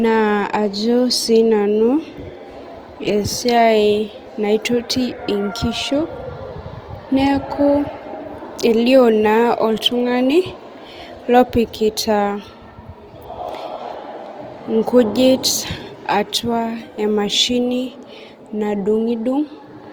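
Opus compression runs throughout this speech clip: the sound is rough and grainy, with tonal parts turning noisy, the likely result of Opus's music mode filling starved bands with folded or noise content at a low bitrate near 24 kbps, while the bandwidth stays full to about 20.2 kHz.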